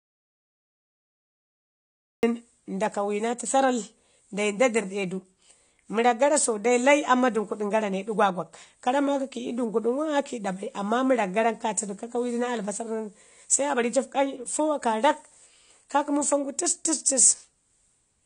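Right from the first moment there's nothing at all: the recording opens in a dropout to silence that's already under way and runs until about 2.23 s. It's plain silence with no room tone underneath, so the input was most likely lost, through a disconnected device, a broken link or a mute, while the recorder kept writing. When the speech arrives it comes in abruptly, mid-flow, and whatever came before is simply gone.

Across the whole speech there's plainly audible codec damage that sounds like AAC compression, likely AAC-LC at a low bitrate, which fits something around 32 kbps. Nothing survives above about 9.7 kHz, so the top end is shaved off and the speech comes across dull. At that rate the encoder starves the spectrum, leaving a smeared, warbly texture on held sounds and a fizzy edge on the sibilants.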